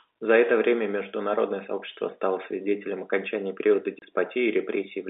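At 3.99 s the speech drops out for 30 ms, ending at 4.02 s. This is packet loss filled with silence: one chunk of audio never arrived, which points to a single lost packet, and the receiver inserted digital silence instead. On the waveform it shows as a flat, near-silent gap with vertical edges. On the spectrogram it is a blank vertical strip within the narrow telephone band.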